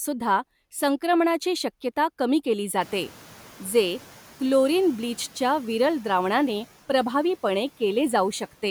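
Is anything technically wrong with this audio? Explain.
Yes. There is one fault in this speech clip, a noise suppressor catching up. It runs from 2.8 to 4.19 s, between "संक्रमणाची शक्यता कमी केली" and "क्लोरीन ब्लीचच्या विरल द्रावणाने". Around 3 s the room noise jumps by about 24 dB. The suppressor's noise estimate still reflects the quieter earlier background. So the new noise passes through only lightly reduced at first. Over about 1.4 s the estimate adapts. The noise then sinks by about 5 dB.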